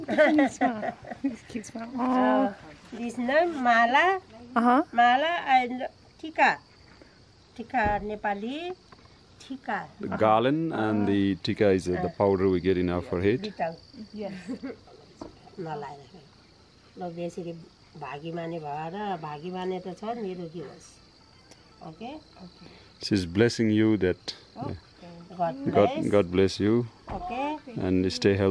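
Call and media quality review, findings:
Nothing to flag on this one; the audio holds steady the whole way with no dropouts, glitches or level jumps to chase down.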